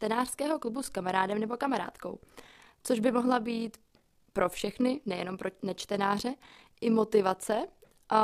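A rough, robotic flutter runs through the whole speech clip: overlap-add ripple, about 6 dB deep and around 40 times a second, from frames rejoined without constant gain.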